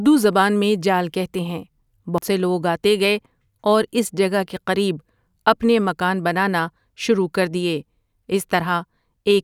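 At 2.18 s the speech shows a CD skip. A physical shock or a surface defect knocked the laser off its track onto another turn of the spiral, so the player briefly muted, for a few milliseconds here, and resumed reading from a different point on the disc. It is heard as a short tick followed by an abrupt discontinuity in the speech, with playback picking up again just before "سے لوگ آتے گئے".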